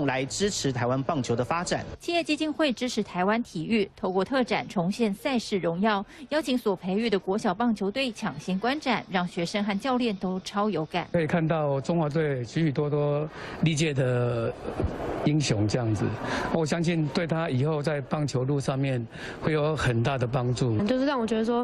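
At 10.31 to 10.39 s a late packet drained the jitter buffer, causing a short stall: about 43 ms of sound is stretched and held with a slight buzz or dip before playback resumes intact.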